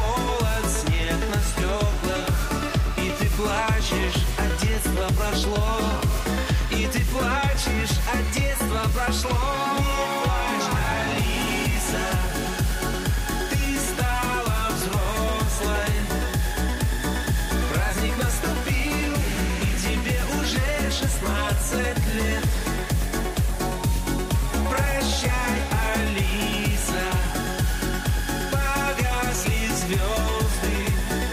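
Nothing stood out as a technical problem on listening to this audio.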